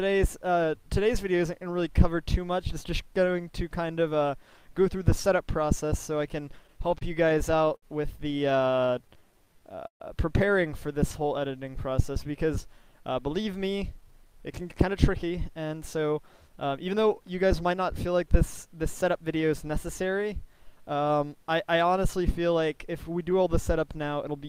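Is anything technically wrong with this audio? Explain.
Yes. Several network-timing faults affect the sound between about 6.7 and 19.5 s.

Repeated stalls (stutter) at 6.67–7.84 s and 8.39–9.24 s: late packets kept emptying the jitter buffer, so the receiver stretched the last sound across 10 and then 8 short gaps. The longest gap was 61 ms. The audio drags and stutters, with nothing lost.

Jitter buffer slow-down at 8.91–9.76 s and 11.23–12.32 s: to rebuild its reserve, the receiver repeated pitch periods, adding 71 ms and 119 ms. The audio plays at 93% and 90% speed with unchanged pitch, so it sounds drawn out.

Call audio freeze at 9.87–10.02 s: packets were likely held up in transit, leaving the buffer empty. A 128 ms fill is inserted, with about 100 ms of it silent, and the sound then resumes where it stopped.

Jitter buffer speed-up from 14.01 to 19.51 s: with excess audio queued, the receiver trimmed short pitch-period slices, removing around 0.4 s in total. 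The audio plays at 106% speed with unchanged pitch and sounds slightly hurried.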